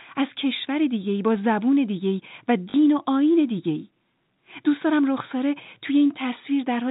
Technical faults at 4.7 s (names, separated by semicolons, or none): none